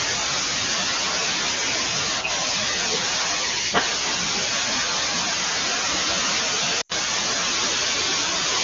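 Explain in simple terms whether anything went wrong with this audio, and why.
Lost AMR speech frames at 6.81 to 6.92 s: radio errors corrupted about 80 ms of audio, so the decoder stretched the last good sound and faded it briefly.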